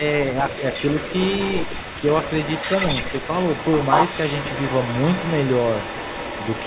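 From 0 to 6.66 s, a quieter copy of the speech trails 187 ms behind. This echo leak likely comes from a loudspeaker echo imperfectly cancelled.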